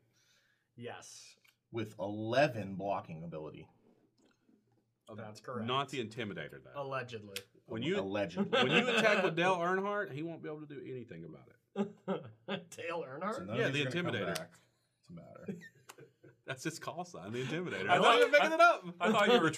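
Nothing in the audio stood out as a technical problem on listening.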